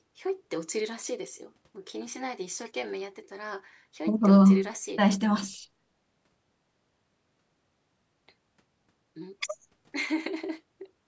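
No technical faults can be heard in the speech. The call microphone processing is audible as a loss of the lowest bass and an upper limit of 8 kHz, both normal for that path.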